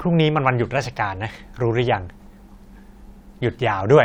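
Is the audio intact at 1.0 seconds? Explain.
Yes, the audio is intact at 1.0 seconds, with no audible fault at that point.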